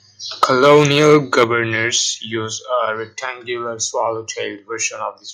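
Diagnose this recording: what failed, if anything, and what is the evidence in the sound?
Microphone overload, 0.43 to 1.44 s: speech peaks are flattened about 6 dB past the converter's ceiling, adding harsh crackle. The likely cause is excessive microphone input gain.

Microphone volume stepped down at 0.44 s (about 3 dB) and 1.44 s (about 6 dB): abrupt level drops, likely call processing cutting device gain after the clipping.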